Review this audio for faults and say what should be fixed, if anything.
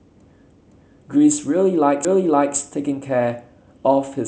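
Repeated buffer at 0.51 to 1.02 s and at 2.05 to 2.56 s: a half-second stretch of speech plays twice, with a hard join at each repeat, which fits an 8192-sample buffer being replayed when fresh audio arrived late. Unlike a dropout, nothing falls silent and nothing seems lost. The repeat is an exact copy, not a smeared fill. To prevent it, give the playback path enough headroom that each buffer is delivered before the device needs it.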